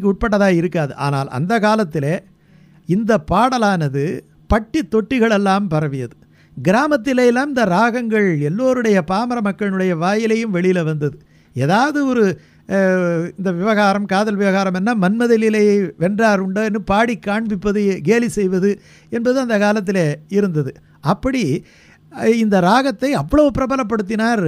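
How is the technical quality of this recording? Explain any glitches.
No audible glitches or faults.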